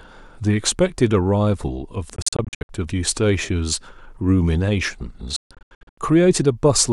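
From 2.16 to 2.69 s the speech breaks into a stutter of short silences, about 305 ms missing in total, with the longest gap 61 ms. From 5.36 to 5.98 s it happens again and worse: about 447 ms lost, including one 142 ms hole. The gaps have abrupt edges or a fade of a few milliseconds, and the speech picks up later each time, having run on underneath. This is a Bluetooth dropout, likely from wireless packets arriving too late and being discarded.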